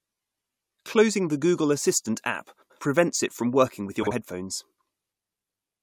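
At 2.62 to 2.79 s, between "assistant app" and "prevents it from working", the speech has frames out of order. Two adjacent blocks of about 85 ms each, which fits runs of four codec frames, were decoded in swapped order. The passage becomes a garbled flutter, with no lost time. The same swap recurs at 4.03 to 4.12 s, after "it from working with", using shorter blocks of about 43 ms. On a spectrogram, formant tracks jump discontinuously at each seam, and the waveform shows abrupt steps there.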